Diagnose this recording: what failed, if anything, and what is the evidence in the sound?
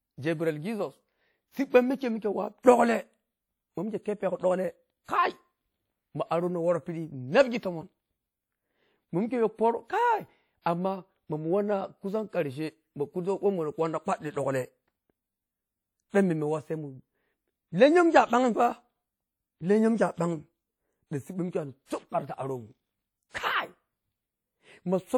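Codec stage: throughout the speech there is a ringing, washy texture with a hiss that rises and falls with the signal. This is likely WMA compression at a low bitrate, around 48 kbps. The transform codec zeroes weak spectral lines, so a spectrogram shows patchy, blocky holes and smeared energy, though content still extends to about 20.1 kHz.

Pre-echo, also at the codec stage: at 5.04–5.09 s and 10.62–10.66 s, a brief hiss of about 44–45 ms comes just before sharp attacks, which sound softened. The codec spreads quantisation noise over the whole block, so it fills the quiet moment before each onset. On the waveform this shows as low-level fuzz ahead of the transient; the spectrogram shows a broadband haze leading into it.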